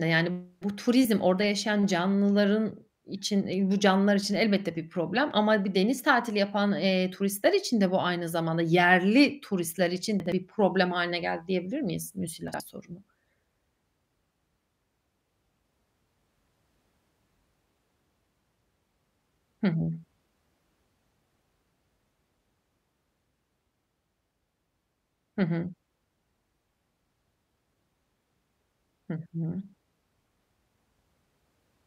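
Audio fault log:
10.2–10.32 s and 12.48–12.6 s, chunks out of order: in each span one 60 ms chunk of the speech arrives a chunk late and plays after its successor. The two pieces swap places, so a brief jumbled blip with three hard joins results. Unlike a dropout, no audio goes missing and no silence appears. Unlike a repeat or stutter, nothing is heard twice. The material is all present, just reversed in sequence.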